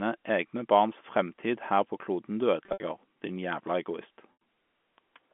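Speech carried over a G.711 A-law telephone path, band-limited to roughly 200 Hz to 3.4 kHz, with two bursts of packet loss with pitch repetition. From 2.64 to 2.80 s, about 120 ms of audio drops out in scattered gaps. The receiver bridges them by repeating the last pitch period, giving a held, buzzy tone. In the longest 70 ms run, that repetition fades into silence before the speech cross-fades back. A second 80 ms loss at 4.33 to 4.38 s produces the same concealment artefact.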